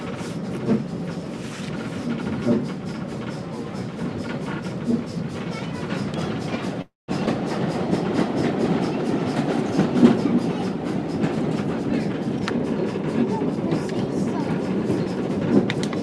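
The audio has three network-related timing faults. From 6.81 to 7.10 s the sound stops and is replaced by a fading continuation of the last moment that drops into roughly 180 ms of silence, about 266 ms in all. This is a call audio freeze, likely from delayed packets emptying the jitter buffer. Unlike a dropout, nothing is lost and the audio resumes exactly where it halted. Shortly after, between 7.26 and 7.29 s, comes a skip ahead: playback jumps forward with almost no gap, and about a tenth of a second of material is missing. Where the freeze inserts time, this removes it, with the two sides spliced almost directly together. From 11.84 to 14.07 s a jitter buffer speed-up makes the audio run about 4% fast, trimming roughly 100 ms in total by cutting many tiny pitch-period slices to reduce excess buffered delay. The pitch stays unchanged, which separates it from resampling errors.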